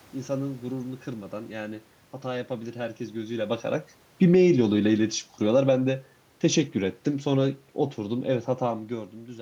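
At 4.08 s the automatic gain control judged the speech input too loud and began lowering its gain, falling by about 8 dB until 8.95 s. The speech is loud at first, then gradually sinks, carrying the room noise down with it.

Within that decline, from 4.41 to 4.85 s, the automatic gain control briefly rose, raising its gain by about 3 dB. Speech and background swell together over those 0.44 s, before the downward drift resumes, separate from the talker's movements near 3 s and 8.5 s.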